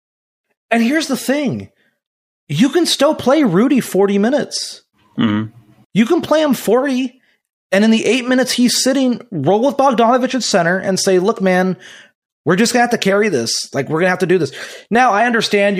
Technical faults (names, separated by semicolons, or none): none